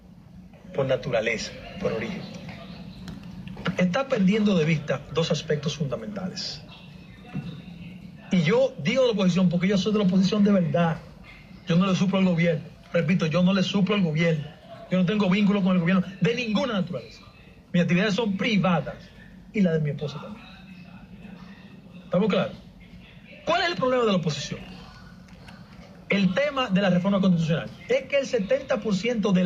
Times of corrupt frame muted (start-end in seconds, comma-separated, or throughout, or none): none